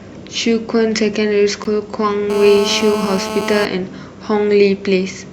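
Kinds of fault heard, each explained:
Gap at a join of encoded pieces: Two separately encoded segments meet untrimmed, so leftover encoder delay and frame padding leave a hole. At 1.64 s the speech drops out for about 12 ms, showing as a brief vertical blank stripe on the spectrogram and a flat, slightly smeared-edged notch in the waveform.
GSM phone buzz: A nearby 2G handset on a call sends radio bursts about 217 times a second, which the audio circuitry rectifies. From 2.3 to 3.65 s a steady, raspy buzz sits about 6 dB below the speech, drawn as evenly spaced horizontal harmonic lines from 217 Hz upward.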